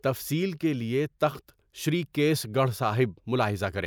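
Listening through this speech recording, nothing stood out as a technical problem.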